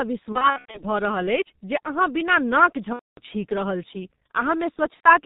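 Speech runs through the G.723.1 codec, heavily damaged at a rate that points to about 6.3 kbit/s. It sounds muffled and hoarse with smeared consonants, and a spectrogram shows nothing above 4 kHz. VoIP packet loss concealed by the speech codec occurs three times: 0.32–0.83 s, with about 240 ms missing in scattered gaps (the longest 90 ms); 2.93–3.20 s, about 240 ms; and 4.94–5.09 s, about 90 ms. The decoder repeats its last pitch and filter, so the speech turns into a fading buzz or coloured noise. The waveform envelope there decays in steps that fit 30 ms frames.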